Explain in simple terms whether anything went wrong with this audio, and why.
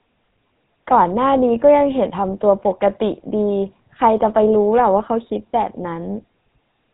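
GSM full-rate codec damage runs through the whole recording, start to finish. The speech was squeezed through an old mobile-phone codec that rebuilds the voice from a simple buzz of pulses and drops everything above 4 kHz, leaving it muffled, buzzy and gravelly.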